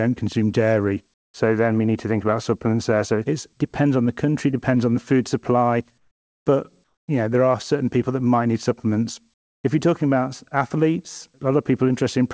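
At 1.14–1.34, 5.98–6.46, 6.84–7.08 and 9.34–9.64 s, the background turns flat and featureless, about 6 to 16 dB quieter. This is likely comfort noise filling transmission pauses.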